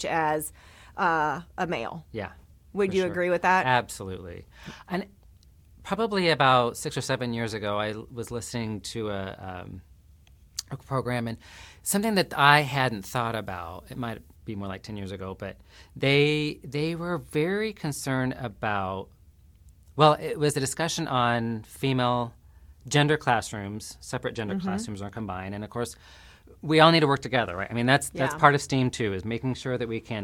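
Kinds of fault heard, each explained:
Pre-emphasis left on: a treble boost applied before recording or transmission was never undone by the matching de-emphasis, so the top end stays lifted. From about 11.87 to 14.36 s the speech turns thin, bright and hissy, with exaggerated sibilants. The lift is about 8 dB at 10 kHz relative to 1 kHz, a shape that fits the CD 50/15 µs emphasis curve. A complementary de-emphasis filter on that stretch would correct it.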